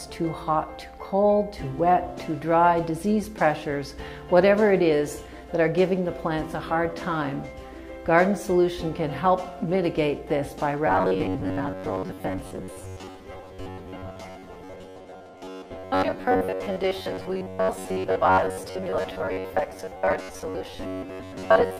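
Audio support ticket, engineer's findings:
Robotic sound from repeated short buffers, 10.87 s to end (21.79 s). Rigid metallic buzz locked at 93.8 Hz, sound only loosely tracked. Likely input starvation: playback re-loops last chunk, fits ~10.7 ms buffer, roughly 70% of time repeated, real audio skipped.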